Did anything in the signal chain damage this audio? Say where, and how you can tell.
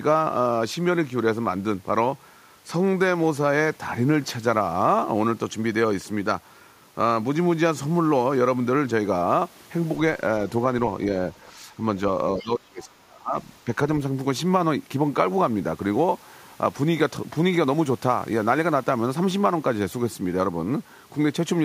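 Yes, both in the call-processing stage, and both likely from the echo canceller. At 11.32 to 11.37 s and again at 12.40 to 12.44 s there are brief scraps of the other side's voice leaking through. They sit well under the talker's speech, around 35 dB down the first time and nearer 25 dB the second. Loudspeaker sound got back into the mic, and the canceller didn't fully subtract it.

From 12.36 to 13.36 s there's speech suppressed in double talk. For about a second, the talker's level sags, bottoming out roughly 30 dB down. That overlaps the second leak, so both ends were active at once. The canceller couldn't tell the near talker from the echo and clamped down on the whole mic signal instead of just the echo path.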